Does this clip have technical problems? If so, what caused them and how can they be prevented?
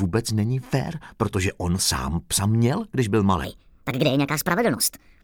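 Yes. From 3.44 s to the end at 5.23 s there's a section at the wrong speed. The sound runs 1.41 times fast, so it's hurried and sits roughly seven semitones high, likely because that stretch was fitted to the wrong clock. To prevent it, confirm every segment's sample rate matches the session before editing or export, and resample properly wherever it doesn't.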